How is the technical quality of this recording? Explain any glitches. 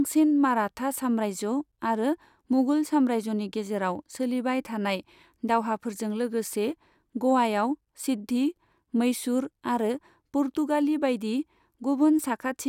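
No glitches can be heard anywhere in the recording. There is nothing in it that calls for a technical explanation.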